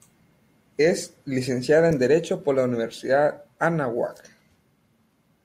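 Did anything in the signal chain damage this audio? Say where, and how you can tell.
No, no signal-chain faults.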